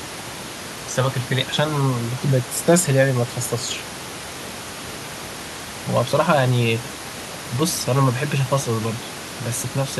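The speech signal shows no technical faults, with the room's own background noise sitting about 12 dB below the voice.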